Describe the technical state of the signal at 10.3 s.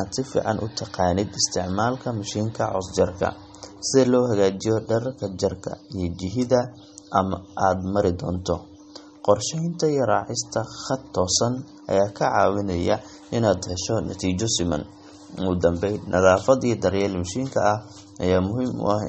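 At 10.3 s the speech carries plainly audible MP3 compression damage, present across the whole clip rather than at that moment alone. Nothing sounds above about 8.4 kHz. The encoder likely ran short of bits, which fits a rate near 32 kbps. It cut the treble at a fixed point and dropped weak frequency lines. Those lines flicker between frames. The result is a watery, swirling texture, chirpy sibilants and softened attacks.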